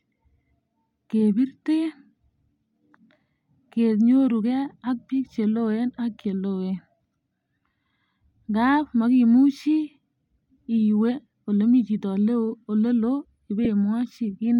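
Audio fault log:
13.65 s, lost LE Audio frames: 7.5 ms patched by repeating the prior spectrum with random signs, a brief noisy smear, not a silent dropout.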